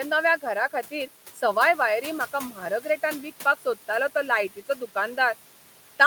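Throughout the speech, noise suppressor artifacts pump the room noise: it drops by about 11 dB in pauses and swells back under speech. A spectrogram shows the noise floor darkening between utterances and brightening beneath them.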